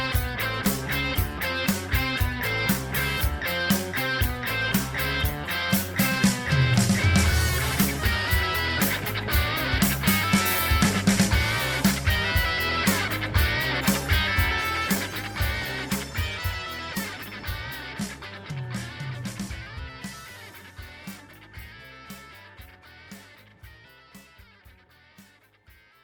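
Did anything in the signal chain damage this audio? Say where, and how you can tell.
No, nothing along the signal chain has audibly damaged this audio: level, timing and continuity hold steady throughout, with no stage leaving a mark on the signal.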